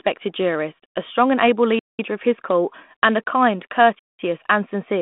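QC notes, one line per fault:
1.79–1.99 s and 3.99–4.19 s: gap between chunks. Sound stops dead for 200 ms with nothing lost on either side. The holes fall 2.2 s apart, fitting 2-second chunks with silence at each join, unlike a dropout, which removes sound.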